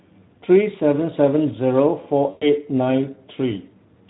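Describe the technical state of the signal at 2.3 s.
At 2.3 s the stream is just inside a gap where VoIP packets were lost and the speech codec's concealment filled in. From 2.29 to 2.46 s the decoder had no incoming data for about 120 ms, which fits six consecutive 20 ms frames. It kept extending the last pitch and spectral envelope it had received, lowering the level frame by frame. The speech flattens into a buzzy tone or coloured noise that fades, and it stays weak or distorted briefly after real packets resume, because each decoded frame depends on the one before.

Underneath this, the whole signal carries Speex codec damage, at a rate that points to roughly 11 kbps. Because so few bits describe the excitation, the speech sounds hoarse and noisy, and the damage is clearly audible. At 2.3 s that coarseness is what the concealment is extrapolating from.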